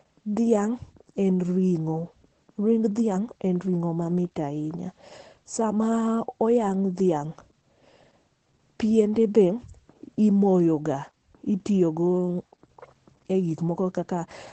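Throughout the speech, Opus voice compression is running in its SILK linear-prediction mode at a low rate, with damage that sounds consistent with a bitrate around 12 kbps. The codec has limited itself to wideband, so nothing survives above 8.7 kHz, and it describes the excitation only coarsely. The result is plainly audible: the voice sounds muffled and dull at the top, with a hoarse, slightly robotic edge.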